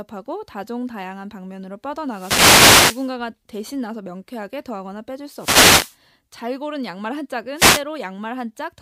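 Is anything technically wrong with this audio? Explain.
Yes. The speech has three wireless microphone noise hits, at 2.07–3.15 s, 5.34–5.98 s and 7.55–7.83 s. Each is a swish of static that rises over the voice, from about 1.1 s long down to about 0.3 s. The radio signal fades as reflections cancel, and the receiver's noise swells to fill the gap. Unlike a digital dropout, which cuts to silence, these bursts hiss over the speech.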